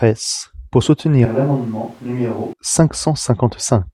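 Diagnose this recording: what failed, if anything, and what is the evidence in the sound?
The close microphone likely dropped out at the capture stage, causing a switch to a distant microphone from 1.26 to 2.53 s. The speech turns roomy and hollow, loses bass, falls by about 10 dB and sits nearer the room noise, changing abruptly at both ends.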